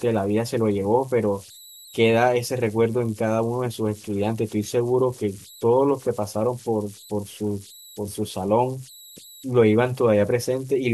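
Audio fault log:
Throughout: converter idle tones. An undithered delta-sigma converter settles into repeating bit patterns on low-level input, leaving a whistle around 4 kHz, about 25 dB below the speech, most audible in pauses; a spectrogram shows a thin horizontal line there, with grainy texture beneath quiet passages.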